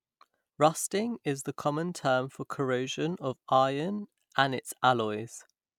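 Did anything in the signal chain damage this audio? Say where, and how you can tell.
No, nothing in the chain.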